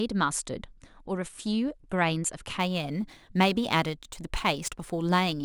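From 2.60 s to the end, the speech carries crude rate conversion: samples were picked by nearest neighbour instead of filtered resampling, which fits a 48 kHz to 44.1 kHz change. A gritty, inharmonic fizz roughly 25 dB below the signal tracks louder passages. A spectrogram shows faint aliased lines unrelated to the harmonics.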